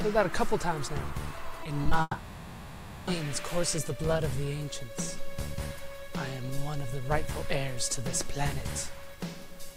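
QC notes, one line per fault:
1.63–1.67, 1.83–1.87 and 1.89–1.93 s, short concealed packet loss: three 20 ms holes close together, each patched by carrying the preceding sound forward and blending back in. You hear a quick smear or wobble, and a brief transient in there could get swallowed.
2.01–3.09 s, long network dropout: about a second of audio goes missing, which is likely a network stall. The receiver keeps extending the last sound as a fading buzz or hiss for almost the whole gap, with only about 20 ms of silence before real audio resumes, minus what was lost.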